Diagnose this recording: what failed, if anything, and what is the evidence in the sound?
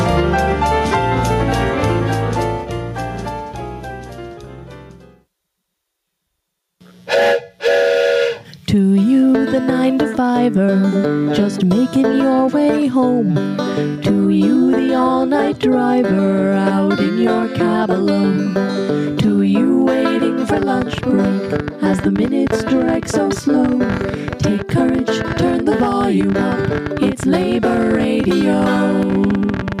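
Gain pumping runs through the whole clip. The level ducks by around 10 dB under each loud passage, so everything sounds squashed. That's likely the input gain set far too high at capture, with a fast limiter clamping down on every peak.

From 20.49 s to the end there's a train of clicks, about 14 per second at an uneven pace. They stand well above the sound and keep ticking through the pauses too. My guess is likely interference on the analogue wiring or a faulty connection or power supply.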